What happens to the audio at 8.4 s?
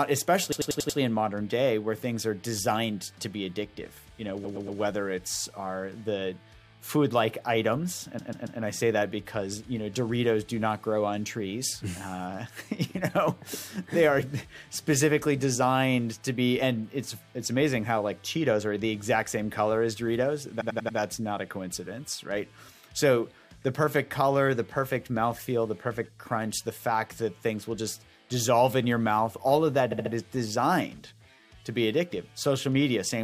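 Repeated frames from 8.18 to 8.59 s: a block of about 139 ms of compressed audio plays three extra times, producing a stutter and adding 418 ms.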